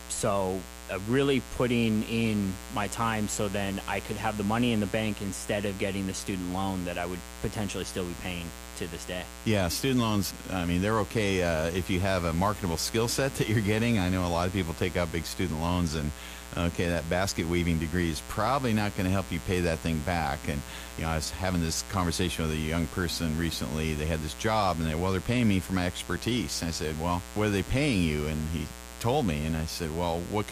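A mains buzz runs under the speech for the whole clip. It sits at about 15 dB below the speech. Sharp switching spikes leaked in twice per 60 Hz cycle. Their harmonics climb into the kilohertz range. The result is a steady, raspy buzz.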